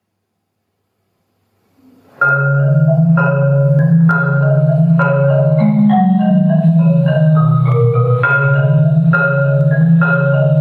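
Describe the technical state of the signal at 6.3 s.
At 6.3 s the sound shows gain pumping, present across the whole clip: the level rises and ducks by around 10 dB as loud sounds arrive, likely from gain set far too high and a fast limiter clamping it. Unlike clipping, the peaks aren't flattened; the overall level moves.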